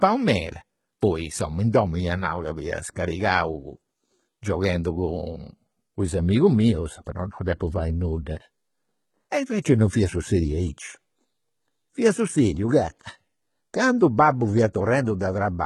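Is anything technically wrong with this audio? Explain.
Yes. HE-AAC compression, heavy and present throughout the speech, likely from the codec rebuilding the treble by spectral band replication at a very low bitrate, around 16 kbps. The upper band is synthesised from copied lower bands, so s sounds come out gritty, metallic and lispy.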